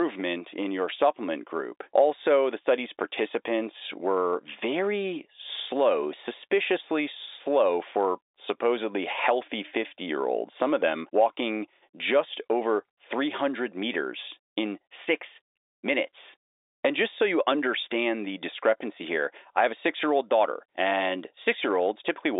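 No faults: the speech sits in a telephone band of about 300 Hz to 3.7 kHz with nothing above 3.8 kHz, as expected of G.711 telephone coding, and its quantisation noise is faint or absent.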